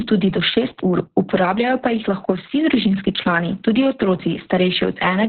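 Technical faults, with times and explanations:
Throughout: Opus voice compression. Nothing reaches above 4.4 kHz, so the speech is confined to a narrow telephone-like band and sounds muffled, with sibilants dulled. The damage is heavy, pointing to a very low bitrate of around 6 kbps, where the linear-prediction coder keeps only a rough outline of the vocal tract and approximates the excitation sparsely. That coarse excitation makes the speech hoarse, buzzy and slightly robotic.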